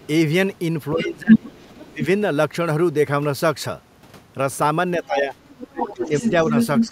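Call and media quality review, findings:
Other side's voice leaking through: faint second voice at 0.00–0.06 s (about 30 dB under the talker) and 1.47–1.85 s (about 25 dB under). Near-equal level at 5.49–6.87 s. Likely residual loudspeaker echo the echo canceller failed to remove. Spectrogram: a second, fainter harmonic stack overlapping the talker's. Late section shows two stacks of similar energy.

Speech suppressed in double talk: talker dips and chops at 0.93–2.05 s and 4.97 s to the end, deepest drop about 20 dB. Roughly 0.7 s and 1 s affected respectively. Both overlap the far-end leak. Likely echo canceller attenuating everything during simultaneous talk. Waveform: envelope notches and gated gaps. Spectrogram: upper harmonics thinning in those spans.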